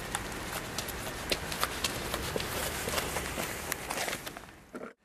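From 2.29 to 4.02 s, a wrong sample rate runs the sound about 1.09 times fast and 1.47 semitones sharp, which fits 44.1 kHz material played at 48 kHz.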